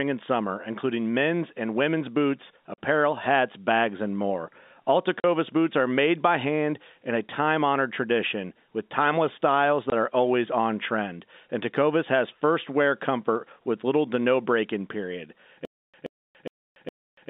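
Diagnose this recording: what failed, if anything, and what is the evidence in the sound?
Network stage, packet loss filled with silence: the audio drops to dead silence at 2.74–2.78 s, between "men's and women's boots" and "hats bags and more", at 5.20–5.24 s just before "boots are made by", and at 9.90–9.92 s. The holes last 40, 40 and 20 ms, whole multiples that fit 20 ms packets, and their edges are hard. Nothing is repeated, which separates this from a stutter.

Playback or buffer stage, stutter with silent gaps: after "no break in period", from 15.65 s to the end, one 127 ms fragment replays four times, each followed by about 286 ms of digital silence, on an even 412 ms cycle. The likely cause is a stalled stream or player that replays its last fragment on each retry and then runs empty. The recurring identical burst distinguishes this from the one-off holes left by packet loss.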